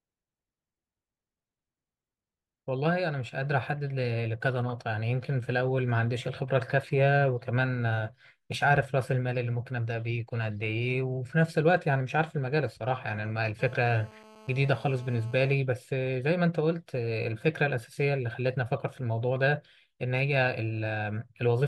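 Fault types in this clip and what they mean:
GSM phone buzz: a nearby 2G phone on a call sends 217 bursts per second that the circuit rectifies, leaving a steady, raspy 217 Hz buzz about 24 dB below the speech.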